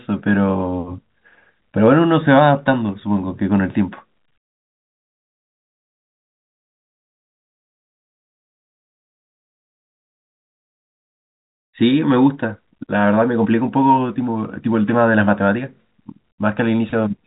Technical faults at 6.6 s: none

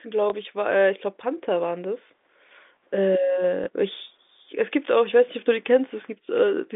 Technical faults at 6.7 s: none

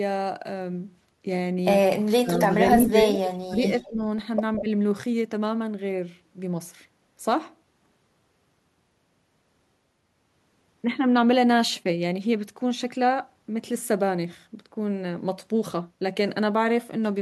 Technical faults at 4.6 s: echo leak; speech suppressed in double talk

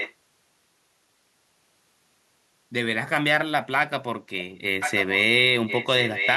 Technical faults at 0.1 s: echo leak

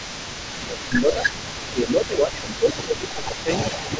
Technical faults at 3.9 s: echo leak; speech suppressed in double talk

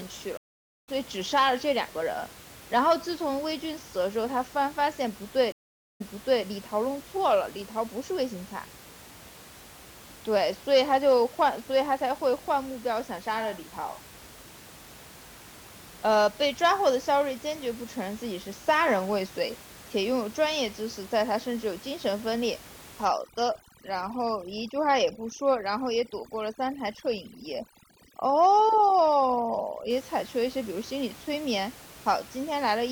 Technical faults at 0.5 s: stream reconnect

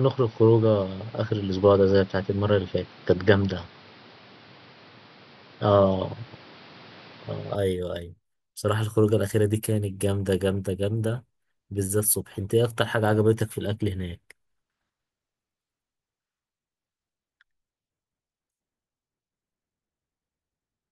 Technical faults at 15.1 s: none

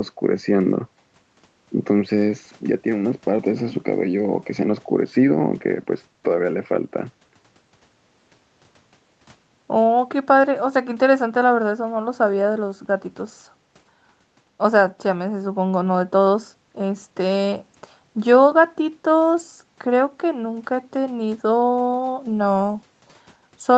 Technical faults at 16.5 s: none

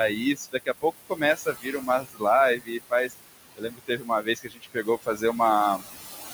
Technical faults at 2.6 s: noise suppressor artifacts; speech cut by the noise suppressor

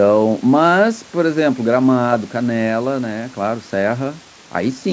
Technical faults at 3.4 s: none

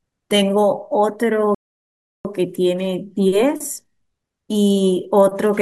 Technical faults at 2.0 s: playback stall

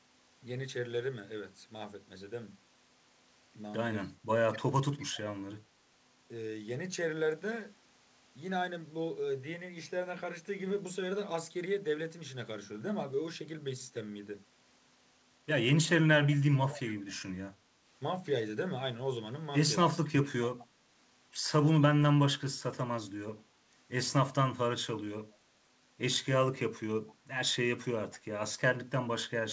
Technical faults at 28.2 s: echo leak

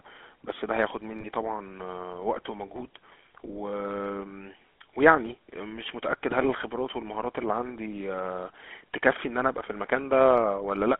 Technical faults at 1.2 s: GSM full-rate codec; lost GSM frames

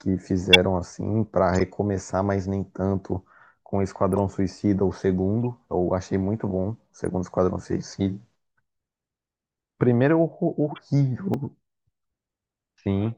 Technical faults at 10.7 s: corrupt frame decoded

